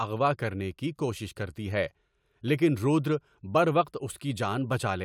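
No technical faults are audible anywhere here.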